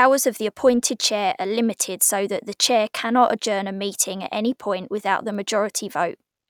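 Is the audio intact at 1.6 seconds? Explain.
Yes, the speech at 1.6 seconds plays through intact, with no dropout, click, distortion or other fault at that moment.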